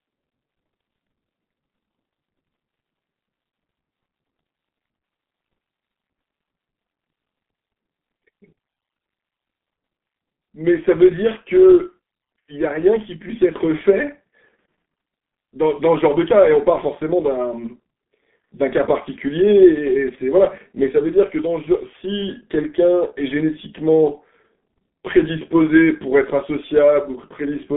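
Throughout the clip the speech has passed through a G.723.1 codec, whose coarse frames and slow voice model, at a rate that points to about 6.3 kbit/s, heavily damage it. The band runs only from 150 Hz to 3.5 kHz, nothing above 3.8 kHz, so speech sounds muffled and hoarse with smeared consonants.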